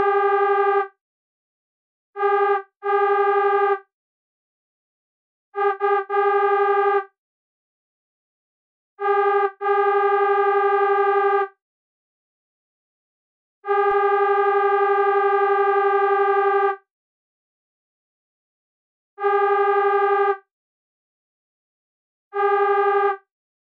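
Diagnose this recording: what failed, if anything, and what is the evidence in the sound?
A DC step at 13.91 s is heard as a single low thump while the sound carries on unchanged. It comes from the converter or analogue input: the waveform's zero line jumps by about -33 dBFS, and a 20 Hz high-pass then drains the offset back toward zero.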